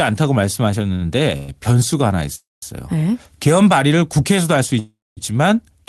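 At 0.95 s there is a short stall from a late packet. A packet arrived late and the jitter buffer ran dry. The receiver held the last sound for about 55 ms until the packet came. The speech then picks up from the same point. Nothing is lost, but one sound drags slightly long, with a faint buzz or dip.

Three call audio freezes follow. Each is likely caused by packets held up in transit, which emptied the jitter buffer. From 1.37 to 1.50 s, the last sound is stretched into a fading buzz or hiss for about 116 ms, with no silence. From 2.35 to 2.64 s, the fill lasts 270 ms and about 200 ms of it is silent. From 4.79 to 5.19 s, the fill lasts 379 ms and about 220 ms of it is silent. After each freeze the speech resumes where it stopped. A gap is added, but no speech is lost. The call codec's bandwidth ends near 12 kHz.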